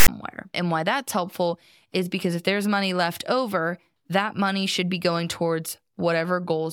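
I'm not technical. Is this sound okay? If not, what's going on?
No, there's a problem right at the start. From 0.00 to 0.08 s you get a short, harsh rasp that cuts off into silence. That's file tags played as audio: the file's text labels and blank padding were read as if they were sound.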